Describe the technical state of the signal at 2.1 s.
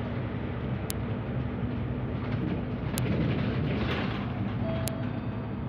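Nothing is wrong with the signal at 2.1 s; the sound there carries through intact, with no dropout, clipping, glitch or other fault at that moment.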